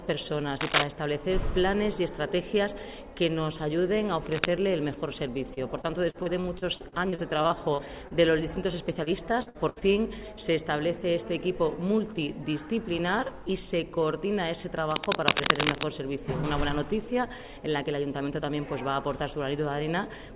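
Cable scratch noise appears at 0.61 to 0.84 s and again at 4.26 to 4.47 s: dense, uneven bursts of scratching laid over the sound, first somewhat louder than it, then about level with it. The likely cause is a worn cable or connector being moved, its contact resistance jumping about.

Repeated packet loss (robotic sound) runs from 5.54 to 8.13 s and from 9.03 to 9.84 s. Lost or late audio left holes that were patched by stretching the preceding sound. Gaps of up to 35 ms in the first stretch and 67 ms in the second leave the sound choppy, with pieces missing, with a quarter of the second stretch patched.

Cable scratch noise returns from 14.91 to 15.86 s, a longer rustling burst again a little above the sound's level. Throughout, the sound stops at 4 kHz, which fits a G.711 call codec.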